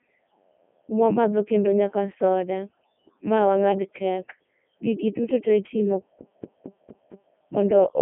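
Speech run through a Codec 2 vocoder the whole way, and it sounds like the top 3.2 kbit/s mode. It's robotic and buzzy because it's rebuilt from sine waves, and it's squeezed to roughly 200 Hz–3.4 kHz with nothing above 3.6 kHz. Then right after "duto tee itimo", from 6.20 to 7.34 s, it's a CD stuck on one turn: a 229 ms chunk repeats five times with a tiny mute at each jump back.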